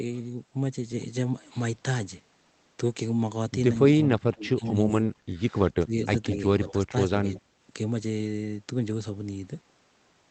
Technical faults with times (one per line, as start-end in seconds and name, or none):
4.06-4.79 speech suppressed in double talk
4.65-4.71 echo leak
5.10-5.20 speech suppressed in double talk
5.79-6.16 speech suppressed in double talk
6.32-6.36 echo leak
6.66-6.72 echo leak
6.71-7.49 speech suppressed in double talk